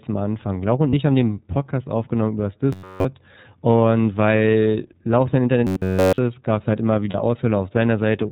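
The speech passes through the iLBC codec throughout, in what sounds like its 30 ms frame mode at 13.33 kbps. Everything above 4 kHz is gone, and the clearly audible coding leaves the speech slightly rough and synthetic. Lost iLBC frames occur at 0.90 to 0.94 s, just before "ich haben den", and again at 7.10 to 7.15 s. Each gap of about 30 ms, which fits a single missing frame, is filled by the decoder repeating the last pitch cycle with added noise. The result is a brief held, buzzy vowel, and the sound recovers immediately because each frame decodes independently. Robotic sound from repeated short buffers appears from 2.73 to 3.05 s, between "aufgenommen übers" and "und weil", and from 5.67 to 6.18 s, just before "ist gab es halt". Audio was likely arriving too rarely, so playback kept looping a roughly 10.7 ms chunk while essentially all the real signal was skipped. This imposes a rigid, metallic 93.8 Hz buzz on the sound.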